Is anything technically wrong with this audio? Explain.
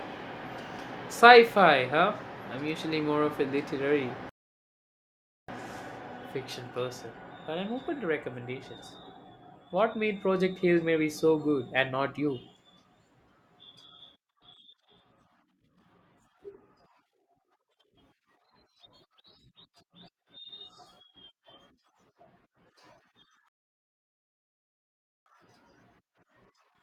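Yes. There are two rebuffering stalls, the first from 4.29 to 5.49 s, right after "more of a literary", and the second from 23.48 to 25.26 s. Each time the player exhausted its downloaded audio and halted until more data arrived. The speech drops into dead silence, then picks up at exactly the point where it stopped, with nothing skipped. The stalls add about 1.19 s and 1.78 s to the running time.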